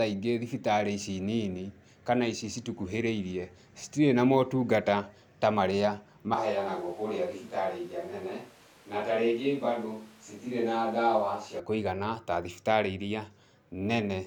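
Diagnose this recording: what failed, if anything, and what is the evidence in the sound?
From 6.34 s to 11.59 s the speech turns roomy and hollow, thinner in the bass, roughly 5 dB quieter, with background noise rising to around 30 dB below the speech. Both changes are abrupt. This is likely a switch to a distant microphone at the capture and analogue wiring stage, with the close microphone's feed dropped. A gain fault or low-cut filter would not add room reverberation and ambient noise, so the cause is the mic's position, not the processing.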